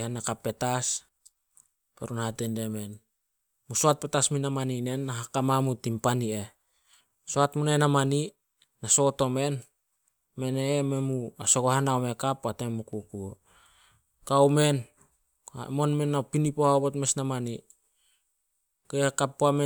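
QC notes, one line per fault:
No technical fault turns up anywhere in the signal, which holds steady with no dropouts, clipping, glitches or level disturbances.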